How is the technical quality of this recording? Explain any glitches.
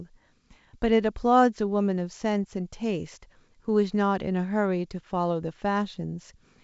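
Nothing stood out on listening to this speech recording, which comes through G.722 wideband telephone coding at 64 kbit/s with its content reaching up to about 7.7 kHz.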